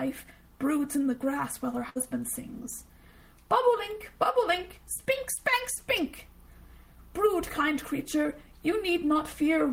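A burst of packet loss at 1.89 to 1.97 s: about 60 ms of lost audio is bridged by the previous sound fading out, then playback resumes past the missing section.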